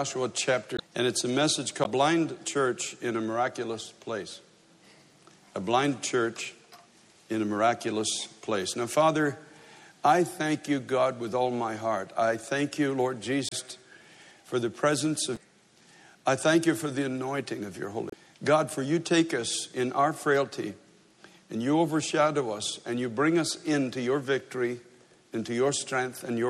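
Throughout, the audio sounds watery and swirly, with dulled treble and smeared attacks, likely from MP3 compression at a bitrate around 64 kb/s. Brief chirps and blips occur at 0.76–0.80, 1.84–1.86, 13.49–13.53, 15.36 and 18.10–18.14 s. These come from damaged data in the compressed stream: the decoder misreads frames and loses sync until it finds the next header.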